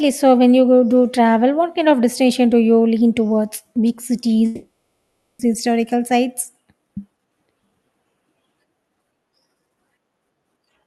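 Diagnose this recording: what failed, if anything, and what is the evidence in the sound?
Network: from 4.45 to 5.41 s the speech becomes a fading buzzy fill, likely a long network dropout concealed by the receiver, and that audio is lost.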